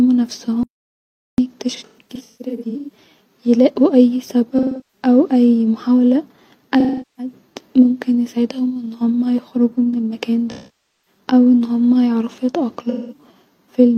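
From 0.63 to 1.38 s the speech drops out to silence for about 0.75 s, with no room tone underneath. This is an audio dropout to silence, likely from the input being lost while the recorder kept writing zeros.

Five stretches of AAC frame loss with concealment follow, where the decoder patches the missing frames from the last good spectrum. From 1.76 to 2.97 s, just before "يلاقو اي", short smeared, noisy patches are scattered over about 1.1 s, the longest run roughly 150 ms. Concealed frame loss returns from 4.58 to 5.06 s after "يلاقو اي", from 6.79 to 7.33 s, from 10.51 to 11.19 s between "هما يخرجو من المكان" and "ان هما يعرفو", and from 12.90 to 13.26 s.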